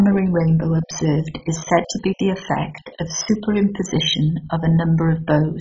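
From start to finish the speech is dull, with nothing above 7.5 kHz and a gurgling, granular roughness as upper bands flicker in and out. That points to MP2 compression, likely at a very low rate near 16 kbps. Unlike a clean low-pass, the remaining bands sound coarsely quantised.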